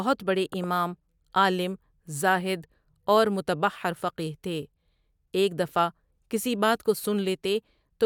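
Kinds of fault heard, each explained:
Loud pop: at 0.53 to 0.66 s, two sharp pops in quick succession punch through the speech and peak a few decibels above it while the talking carries on underneath. A sudden voltage step or spike entering the chain likely caused them, perhaps from a connector, a switch or static. The circuitry after that point turned each jolt into a short pulse, and the pair landed within about an eighth of a second.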